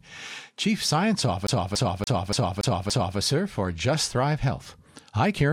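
From 1.47 s to 3.18 s the speech sticks like a CD stuck on one turn: a scratch throws the laser back one track, so the same 0.29 s slice repeats six times, each jump marked by a brief mute. Unlike a stretched dropout, it is a fast, perfectly even stutter.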